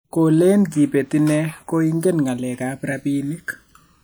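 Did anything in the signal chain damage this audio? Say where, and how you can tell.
Yes. The fault is channels drifting apart, at the converter stage, and it runs throughout the speech. Two devices on separate clocks disagree by roughly 300 ppm. The delay between channels slides to under a millisecond by the end. Summed to mono, comb notches sweep slowly, heard as gradual flanging.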